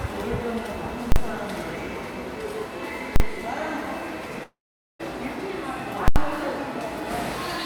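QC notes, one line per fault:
1.12–1.16 s, 3.16–3.20 s and 6.08–6.16 s: invalid numbers at full scale. Infinite or invalid values pin the output to its limit for 40, 40 and 80 ms, heard as loud bangs.
4.43–5.01 s: long network dropout is the likely cause. The last sound continues briefly as a fading buzz, then about 440 ms of silence, and the audio resumes with roughly 560 ms lost.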